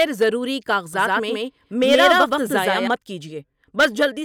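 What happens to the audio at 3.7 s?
At 3.7 s the speech carries on cleanly, with no dropout, click, distortion or other fault at that point.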